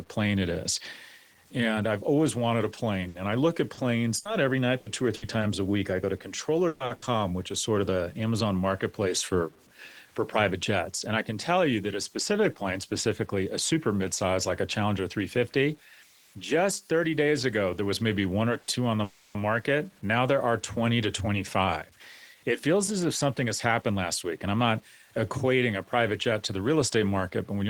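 The whole clip of speech has a gritty, grainy edge that follows the level, roughest in the quiet tails. That's low bit depth without dither, likely 8-bit truncation, with an error floor around 35 dB below the signal, so the distortion rises and falls with the speech.

From 3.01 to 5.45 s there's repeated packet loss with a robotic sound: seven short holes, the longest 60 ms, each patched by carrying the last sound forward. It comes back harder from 6.68 to 7.05 s, with three gaps up to 120 ms covering over half that stretch, so it turns choppy.

At 8.14 to 9.06 s the jitter buffer speed-up kicks in. The receiver snips out tiny pitch-period slices to cut delay, about 50 ms in total, so the speech runs at roughly 105% with the pitch unchanged and feels slightly rushed.

At 18.61 s there's a short stall from a late packet. The buffer ran dry, the last sound got stretched by 70 ms, and playback picked up where it left off, so you hear a small held moment with nothing lost.

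Right after, 19.04 to 19.38 s, comes a call audio freeze. The sound hangs on and fades for about 310 ms without dropping to silence, then resumes. A packet hold-up emptying the buffer is the likely cause.

Finally, 21.06 to 24.81 s is another jitter buffer speed-up, this time around 108%, trimming roughly 300 ms, so the pace sounds hurried.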